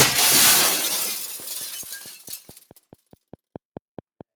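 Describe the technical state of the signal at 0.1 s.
At 0.1 s the sound is already pumping and thinning: sustained parts and tails sink while sharper onsets push through, swinging in level by roughly 10 dB. This is a noise suppressor applied to music or sounds, active throughout, mistaking steady tone and ambience for noise.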